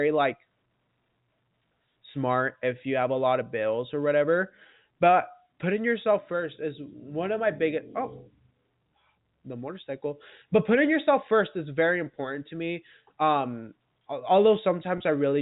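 At 14.98 to 15.00 s, packet loss with pitch repetition bridges a 20 ms gap, which fits a single lost packet. The receiver loops the last pitch period, heard as a brief held, buzzy note. The waveform shows identical repeated cycles, and the spectrogram shows flat, unchanging harmonics inside the telephone band, which stops at 4 kHz.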